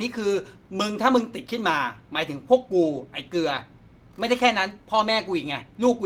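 No audible technical faults turn up anywhere here.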